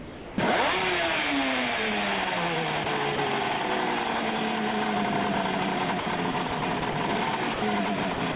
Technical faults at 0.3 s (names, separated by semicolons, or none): sound dropped by the voice detector